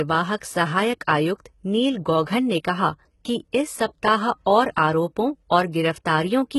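Throughout the speech, s sounds come out gritty and lispy, and the bright treble sounds synthetic, with nothing above about 11.8 kHz. This is likely heavy HE-AAC compression, rebuilding the upper band from copied lower bands, which fits a very low bitrate near 16 kbps.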